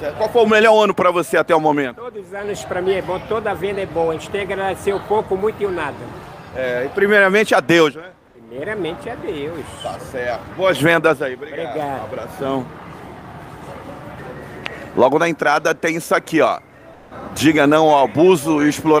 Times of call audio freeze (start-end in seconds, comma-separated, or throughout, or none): none